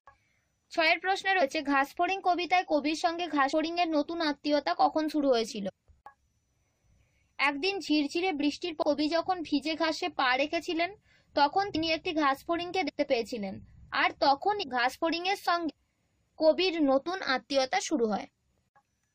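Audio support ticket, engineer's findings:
Short smeared blips where the audio lurches forward, at 1.41, 3.52, 5.68, 8.81, 11.74, 12.88, 14.62 and 15.69 s. Compressed frames skipped: the decoder drops whole 23.2 ms frames, losing roughly 50 to 200 ms each time. Frame overlap softens each join into a blur, not a click.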